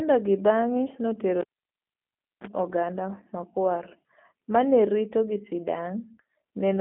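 From the start the speech sounds slightly rough and synthetic, confined to a narrow telephone band with nothing above 3.6 kHz. That is G.729 codec damage: the G.729A coder, fitting an 8 kbit/s stream, rebuilds each 10 ms frame from a vocal tract model and sparse pulses.

At 1.41 s a pop cuts the sound to near silence for about a second, a 35 ms burst of 60 Hz mains buzz follows, then another pop at 2.47 s restores it. This is a cable pulled and plugged in.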